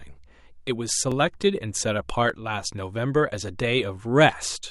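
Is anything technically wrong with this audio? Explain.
Yes. From about 1.1 s to 4.7 s the speech has a regular click or pop about every 1.18 s, roughly four in all. This is clock drift buffer slips, likely from two devices whose clocks disagree by roughly a thousandth. The buffer between them creeps until a few dozen samples are dropped or repeated. The steady spacing sets this apart from packet-loss dropouts or digital clipping, whose clicks fall irregularly and follow network bursts or loud peaks.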